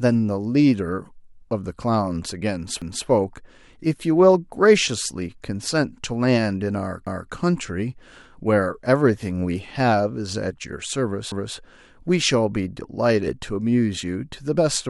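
Speech with overlapping chunks: at 2.82, 7.07 and 11.32 s, about 250 ms of audio replays as each new 4-second chunk starts early, giving a regular stutter.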